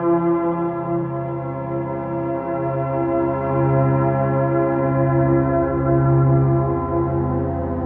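Nothing stood out on listening, and the only trait that can be heard is the expected band limit of call microphone processing, with nothing above 8 kHz and the lowest bass trimmed away.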